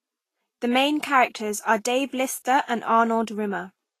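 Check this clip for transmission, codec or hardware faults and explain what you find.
There's one codec fault, running the whole way through. It sounds like Vorbis compression at a low bitrate, around 32 kbps: nothing above 14.2 kHz, and coarsely quantised treble turned to grainy hiss.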